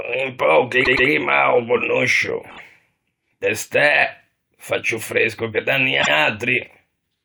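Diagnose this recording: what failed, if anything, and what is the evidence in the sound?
Stutters at 0.83–1.07 s, 2.49–2.60 s and 6.01–6.11 s (after "ciù fresco che da") replay a short slice. These are repeated frames at the codec or storage stage: blocks of 120, 24 and 96 ms replay, lengthening the speech.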